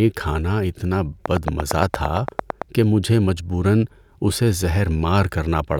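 A speech clip with one fault, a train of clicks from 1.26 to 2.63 s, right after "کھانا اتنا" and ending before "کہ مجھے مجبوراً اسے". There are around fifteen evenly spaced ticks at about 8.8 per second, poking well above the speech, likely from electrical interference or a faulty connection.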